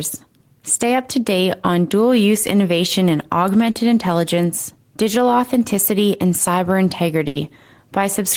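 Around 3.71 to 3.78 s, right after "dual use innovation in", there's short concealed packet loss: about 40 ms never arrived, so the decoder stretched the previous sound, leaving a brief smear before "intelligence digital authenticity and". Then at 7.27 to 7.38 s, just after "digital authenticity and cyber", a burst of packet loss drops about 80 ms, patched with a fading continuation of the last sound before the audio jumps ahead.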